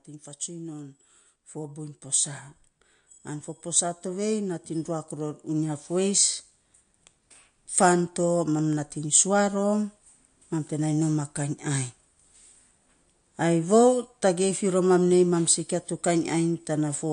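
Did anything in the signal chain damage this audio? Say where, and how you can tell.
Yes. MP3 compression, throughout: the speech sounds watery, with nothing above 9.8 kHz, likely from a low-bitrate encode near 49 kbps that starves weak frequency lines.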